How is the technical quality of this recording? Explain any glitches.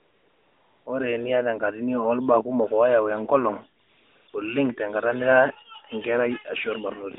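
The recording has one recurring glitch, AMR comfort noise, in a narrowband phone line limited to about 250 Hz to 3.7 kHz with light coding damage consistent with 12.2 kbps AMR-NB.

AMR comfort noise occurs from 0.00 to 0.86 s, 3.82 to 4.28 s, and 4.30 to 4.34 s. The phone judged the talker silent and stopped sending speech frames, so the receiver generated synthetic noise from a rough level-and-spectrum estimate. The real background becomes a smooth, steady hiss that switches in and out.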